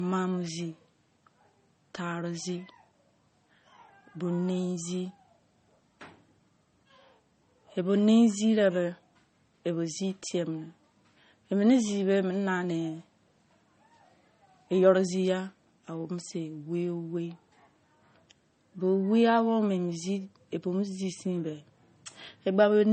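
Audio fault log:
Throughout: low-bitrate audio saved at a high bitrate. The speech sounds dull, with nothing above 8.4 kHz, and a spectrogram shows a hard, flat ceiling there. The likely cause is an early MP3 pass near 32 kbit/s, re-encoded near 192 kbit/s, which restores nothing.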